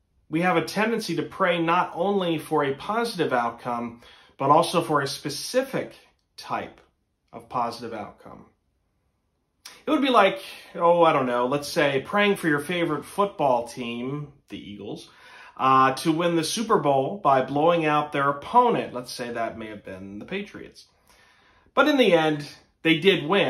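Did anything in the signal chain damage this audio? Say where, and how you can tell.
No, the signal arrives intact at every stage of the chain, with no audible damage from wiring, conversion, processing, transmission or storage.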